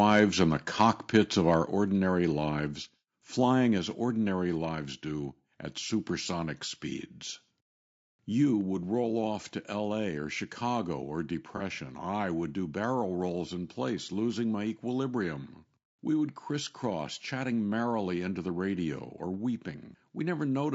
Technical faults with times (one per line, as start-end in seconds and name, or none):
0.00-20.74 low-delay AAC compression
0.09-0.23 microphone overload
0.80-1.18 microphone overload
1.65 microphone volume stepped down
3.78 microphone volume stepped down
11.57-11.62 AAC frame loss with concealment